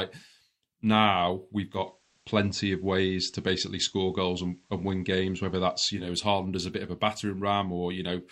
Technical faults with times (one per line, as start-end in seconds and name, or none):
1.63-6.13 digital radio blending to analogue